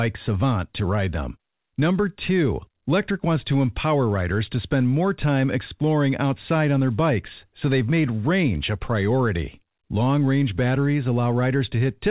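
No technical faults can be heard in the speech. It has passed through a call path whose audio stops at 4 kHz, which fits a narrowband telephone codec such as G.711 A-law.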